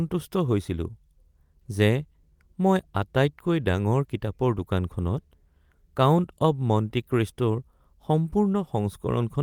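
Nothing in this speech clip stands out as a technical fault; it just runs along without any dropouts, glitches or distortion to point to.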